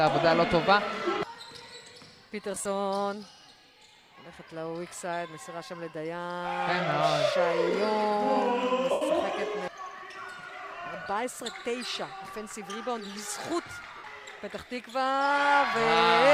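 Lost LE Audio frames cause brief dropouts at 2.55–2.66 s (about 75 ms lost in short bursts, longest run around 30 ms), 8.91–9.02 s (97.5 ms), 11.03–11.07 s (30 ms) and 13.98–14.04 s (60 ms). These gap lengths fit 7.5 ms frames. For each missing stretch the decoder repeats the last spectrum with scrambled phase, so tones become a short noisy smear. On a spectrogram this shows as blurred, unstructured patches where harmonics lose their lines. The waveform shows a noise-like section that fades in level during the longer losses, against the light compression.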